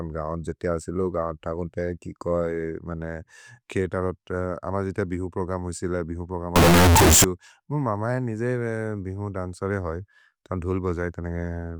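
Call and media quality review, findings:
6.56–7.24 s: sudden loud, harsh burst; background noise as loud as speech, pitch traceable. Float read as integer, likely 32-bit float samples decoded as 32-bit integer. Waveform near-square, pinned at an almost fixed, high level; spectrogram broadband smear, harmonics still visible.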